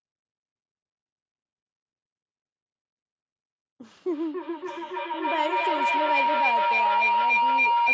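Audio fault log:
4.07 to 7.93 s, feedback howl: from here to the end a tone around 1 kHz swells until it sits about 6 dB above the speech, pulsing roughly every 300 ms. Two devices on the call are feeding each other, each trip round the loop adding level at that frequency, and nothing breaks it before the clip stops.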